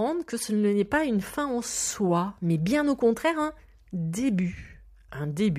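Nothing stood out on listening to this speech clip.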